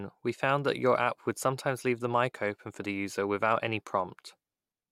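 No technical faults are audible anywhere in the speech.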